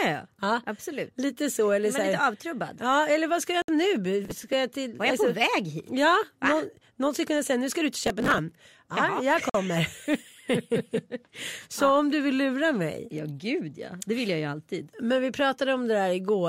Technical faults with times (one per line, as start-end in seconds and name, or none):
3.62-3.68 Bluetooth stall
4.25-4.53 processor overload crackle
8.07-8.38 processor overload crackle
9.49-9.54 Bluetooth stall